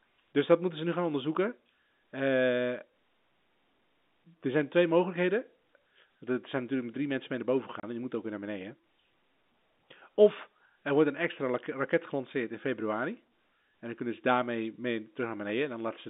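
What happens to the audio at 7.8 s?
Packet loss filled with silence from 7.80 to 7.83 s: a single 30 ms packet went missing, and the receiver substituted silence, leaving an abrupt hole in the speech.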